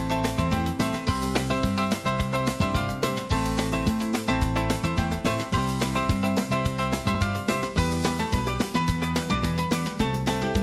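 Underrun with held sample at 5.58 s and 7.15 s: the output buffer ran dry, so the converter froze on its last value for about 1.3 ms and 2.7 ms, gaps of 64 and 128 samples. The audio briefly flatlines, then resumes where it stopped with no audio lost.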